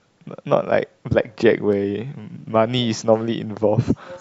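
Clock drift buffer slips, 0.68 to 3.84 s in this speech: about four clicks every 1.05 s, likely mismatched clocks dropping or repeating sample blocks.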